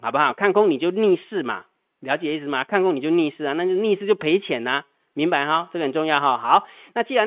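No technical faults can be heard anywhere in the speech. It carries the narrow sound of G.711 telephone coding, with nothing above 4 kHz and a faint noise that rises and falls with the speech level, which fits mu-law coding at an 8 kHz sample rate.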